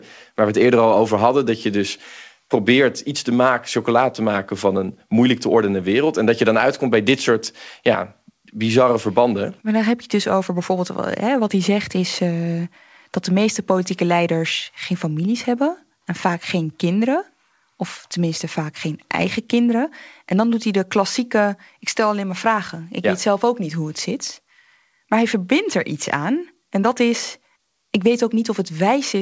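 Nothing stood out on listening to this speech, which arrives through a call path whose G.722 coding leaves nothing above 8 kHz.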